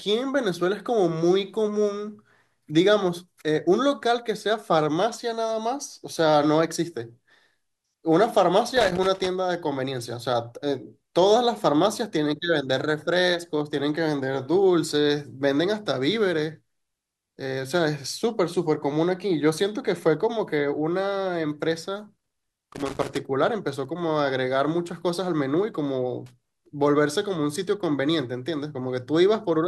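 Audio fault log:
8.77–9.27 s, 22.18–23.17 s, 26.26–26.66 s: loose connector crackle. A worn contact intermittently breaks the speech, giving irregular scratchy bursts. These appear as ragged waveform dropouts with spiky pops and broadband vertical streaks on a spectrogram.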